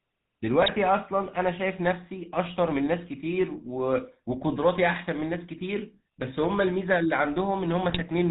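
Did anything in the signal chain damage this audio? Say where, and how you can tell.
Yes, the codec stage did it. The whole clip has the GSM full-rate codec's buzzy, gravelly grain and nothing above 4 kHz. That fits the 13 kbps full-rate coder, which rebuilds speech from a vocal-tract filter fed by sparse, regularly spaced pulses.

On top of that, there are GSM bit errors on the network side, as brief squawky, gargling bursts at 0.62 to 0.71 s and again at 7.90 to 8.02 s. Corrupted bits landed in the filter, pitch or gain parameters, so the decoder bent the spectrum or level for a handful of frames.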